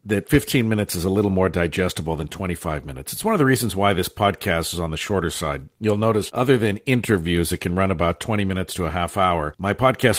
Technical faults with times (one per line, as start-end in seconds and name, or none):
none